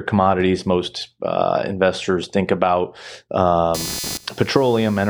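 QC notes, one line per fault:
3.74–5.09 s, computer activity noise: a buzzy, chirping layer enters and runs to the end, pulsing at around 300 per second and sitting roughly 10 dB below the speech. Its rhythm follows processor or peripheral load disturbing the shared audio ground, not the speech itself.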